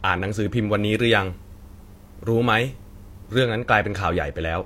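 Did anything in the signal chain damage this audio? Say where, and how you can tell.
Yes. From 0.71 s to 3.43 s the speech turns thin, bright and sibilant, a sign of pre-emphasis left on. The treble lift, about 8 dB at 10 kHz relative to 1 kHz, fits the CD 50/15 µs curve, and the matching de-emphasis was never applied at playback.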